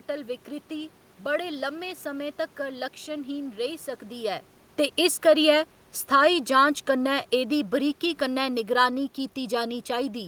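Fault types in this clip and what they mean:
Automatic gain falling: the automatic gain control judged the input too loud or its background noise too strong and eased its gain down between 5.99 and 9.11 s, by about 4 dB, so the speech and the room noise behind it sink together, unlike the talker's own level shift around 4 s.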